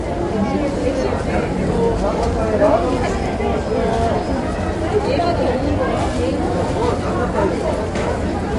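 From start to end, nothing sounds above 11.3 kHz, and the remaining detail has a watery, swirling shimmer with smeared attacks. That points to MP3 compression, likely at a low bitrate around 48 kbps. A plain low-pass filter would dull the top without this flickering.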